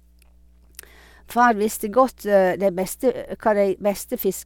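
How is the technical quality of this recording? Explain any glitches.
The recording carries mains hum from start to finish. A ground loop or nearby transformer has coupled the 60 Hz power line into the signal path, so a steady low tone with some low harmonics sits beneath the speech, about 35 dB below it, constant between and during phrases.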